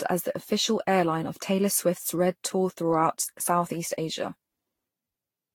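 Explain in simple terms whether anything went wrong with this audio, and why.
Throughout the speech, the sound is swirly, hollow and smeared, with sharp starts blurred. This is likely generation loss: repeated compression, roughly seven times, each pass adding damage.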